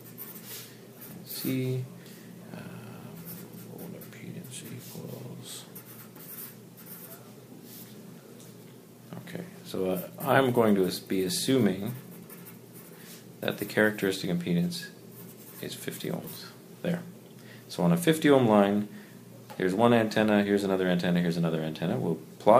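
Nothing stood out on listening.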